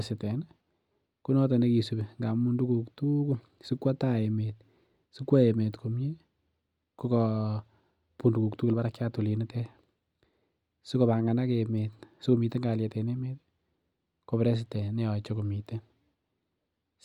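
Speech recording with nothing technically wrong audible anywhere in it.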